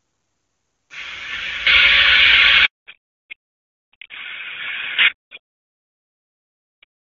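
At 2.65 s a handover gap opens as the call moves from one network to another and no speech frames arrive during the switch. The speech dies away within a few tens of milliseconds, leaving 160 ms of silence until the new link starts at 2.81 s. Whatever was said in that span is simply gone. Before the gap, the wideband HD Voice path sounds clean, with little or no codec damage, which fits AMR-WB near its top rate of 23.85 kbit/s.

From 2.81 s to the end of the clip comes a fallback to narrowband: when the new link comes up, the call no longer carries HD Voice but an older narrowband codec, and the sound points to AMR-NB at 12.2 kbit/s. Nothing above 4 kHz survives, so the sibilance and airy upper detail that were present before the gap disappear. The speech turns duller and rougher, with the boxed-in quality of a traditional phone line.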